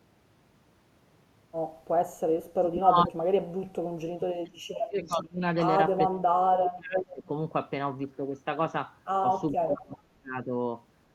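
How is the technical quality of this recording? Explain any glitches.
The recording has two kinds of call-processing fault: repeated dropouts of the voice and two brief echoes.

From 2.37 to 5.41 s, 6.06 to 7.28 s and 9.52 to 10.54 s the speech falls away by up to about 35 dB, then about 30 dB twice. This is speech suppressed in double talk, likely an echo canceller turning down both the talker and the loudspeaker echo while both ends spoke.

At 5.05 to 5.13 s and 6.97 to 7.05 s a short delayed copy of the voice returns about 0.48 s late. The first is faint, about 25 dB down, and the second is nearly as loud as the speech, about 5 dB down. This is echo leak, likely from a speakerphone whose canceller missed part of its own output. The fixed delay separates it from room reverberation.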